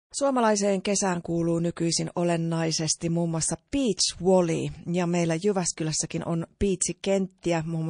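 A speech clip, with the sound pointing to likely low-bitrate MP3 compression, around 40 kbps, throughout; the encoder starves bands of bits, so sibilants turn watery and swirly. The fade-in, complete by 0.12 s, is smooth.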